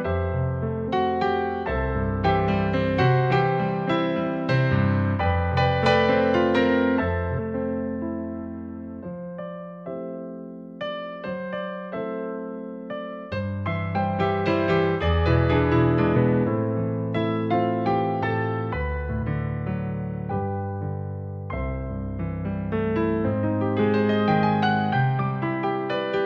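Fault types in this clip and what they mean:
Compressed frames skipped: whole chunks of the coded audio never get played, either because they're missing from the file or because the decoder threw them out as damaged. You hear the sound lurch forward at the join. It happens four times, near 0.84, 7.34, 16.12 and 19.18 s, each jump dropping roughly 200 to 400 ms, which fits a handful of lost 46.4 ms frames.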